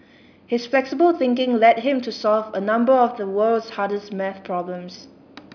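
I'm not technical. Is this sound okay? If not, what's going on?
Yes, this sound is okay, and there's nothing going on with it that needs fixing.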